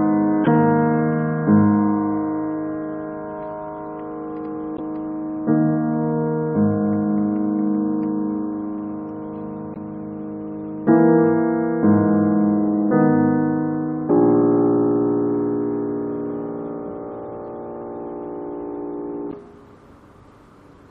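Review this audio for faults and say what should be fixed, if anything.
A watery, swirling quality runs through the whole clip, with dulled treble and smeared attacks. This is likely MP3 compression at a low bitrate, around 64 kbps by the sound of it, where the encoder removes the upper band and lets weak frequency components flicker between frames. Encoding at a higher bitrate, or keeping an uncompressed master, would prevent it.

Short glitches occur at 0.43–0.49 s, 4.74–4.80 s, 9.72–9.77 s and 19.29–19.34 s. Each is damaged data in a compressed stream: corrupted bytes make the decoder misread a frame, lose sync and jump to the next header. Checksummed transfer and verified storage of the file would prevent these glitches.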